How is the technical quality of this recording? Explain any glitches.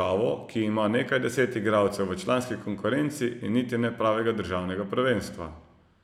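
No glitches or dropouts can be heard here.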